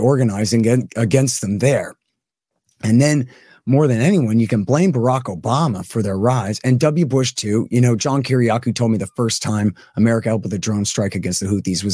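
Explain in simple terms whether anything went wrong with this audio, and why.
Nothing went wrong with this audio, as there is no audible fault anywhere in it.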